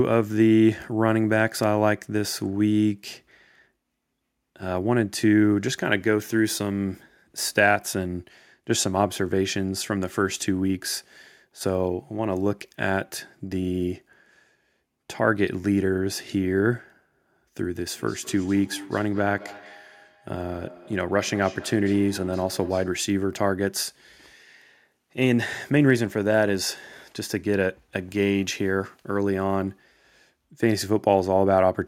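From 17.93 to 22.97 s there is feedback echo between two devices. Speech returns at a steady interval of about a fifth of a second, at most about 20 dB below the speech, thinner and more ringing. Another device in the room replayed this microphone's signal, and it picked that up again.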